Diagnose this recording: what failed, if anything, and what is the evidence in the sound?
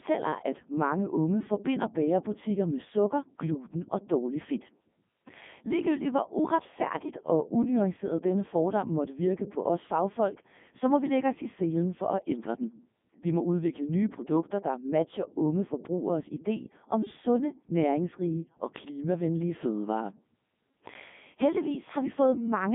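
The failure is at the codec stage: the whole recording has passed through a Codec 2 vocoder. The speech is buzzy and robotic from start to finish, and heavily damaged even at its highest 3.2 kbit/s mode. The decoder rebuilt the voice from sine waves driven by pitch, voicing and envelope, so the original waveform is gone. On a spectrogram, energy sits between 150 Hz and 3.6 kHz with nothing above 3.7 kHz, and harmonics look unnaturally regular.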